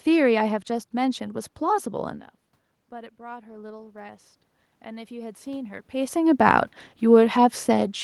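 From 3.17 to 4.29 s you can hear the automatic gain rising. The input had dropped by about 19 dB, so the AGC decided things were too quiet and pushed its gain up by about 4 dB over just over a second. Because it's applied to everything, the room noise swells right along with the voice, which is the giveaway. That's separate from the talker shifting position around 2 s and 6 s.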